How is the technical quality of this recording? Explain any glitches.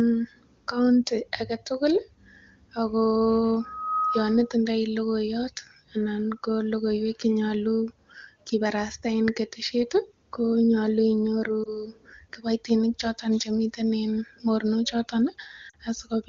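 The recording has two kinds of audible fault: a feedback squeal early on and two brief dropouts near the end, heard through clear wideband (HD Voice) speech.

From 3.60 to 4.53 s there is a loudspeaker feedback squeal. A microphone is picking up its own loudspeaker, and at 1.3 kHz the loop gain exceeds one. That tone swells over roughly 0.4 s until it is about as loud as the speech. On a spectrogram it shows as a bright horizontal line at 1.3 kHz that thickens and then stops.

Lost AMR speech frames occur at 11.63 to 11.69 s and at 15.69 to 15.77 s. The first gap lasts 20 ms and the second 40 ms, which fits one lost frame and then two. The decoder fills each gap by repeating the last good settings at falling gain, so the first dips and warbles briefly and the second drops to near silence. The waveform shows short fading notches, and the spectrogram shows a smeared, dimming patch in each gap.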